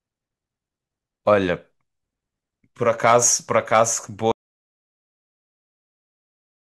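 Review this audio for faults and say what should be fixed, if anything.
At 4.32 s there's an audio dropout to silence: the speech cuts off mid-flow and the last 2.3 s are silent, no room tone at all, running right to the end. That likely means the input dropped out while the recorder kept writing. Monitor levels live and lock down cables and mute controls before rolling.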